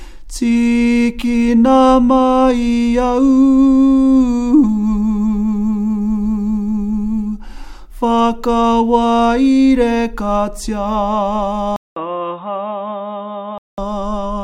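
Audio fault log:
11.76–13.78 s, input switched to a poorer device: after a 200 ms gap the sound turns dull and boxy, with nothing above 3.8 kHz, a level about 5 dB lower and a faint new noise floor. This is likely a change to a narrower-band microphone before the input returns.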